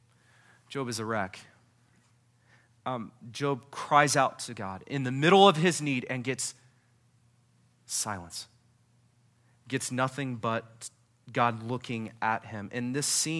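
No technical faults can be heard anywhere in this speech recording.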